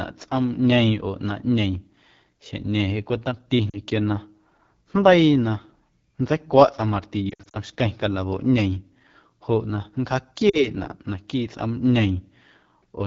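AMR wideband (HD Voice) codec, throughout: the speech sounds rough and raspy, as the vocal tract model strains at a low rate, which fits 8.85 kbit/s.

Lost AMR speech frames at 3.70 to 3.77 s, 7.29 to 7.56 s and 10.49 to 10.67 s: the decoder repeats the last good settings with fading gain, giving brief dips and warbles. The middle cluster is longest, about 140 ms of loss scattered over 240 ms.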